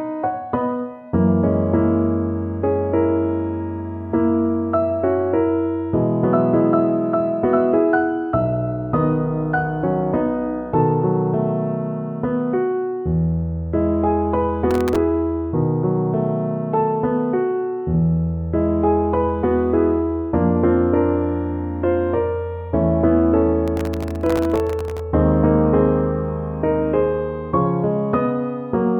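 Processor overload crackle appears at 14.71–14.96 s and 23.68–25.00 s as gritty tearing, as very short buffers miss deadlines and replay stale audio with hard edges.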